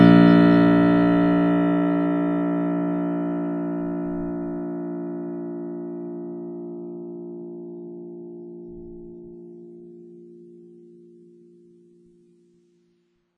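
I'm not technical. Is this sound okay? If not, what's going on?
No, the music sounds dull and smeared from start to finish, with nothing above about 8.1 kHz. The sound rings and washes, and a hiss swells and fades with the playing. That's likely heavy WMA compression squeezing the file too hard.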